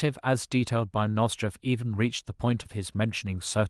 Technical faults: short concealed packet loss; lost packet rebuilt from error correction

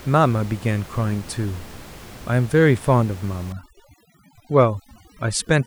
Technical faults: overdone noise removal

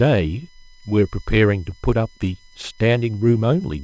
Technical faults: USB whine; clock drift between sender and receiver; repeated timing corrections

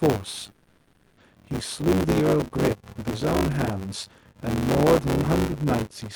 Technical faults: buffer tearing; call audio freeze

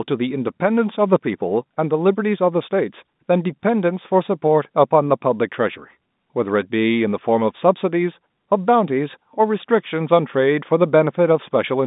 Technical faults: none

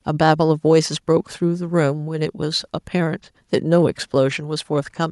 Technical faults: none

